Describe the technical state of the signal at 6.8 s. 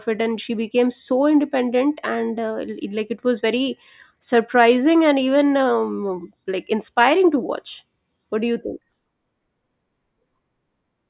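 At 6.8 s the speech signal is intact, with no audible technical fault at that moment.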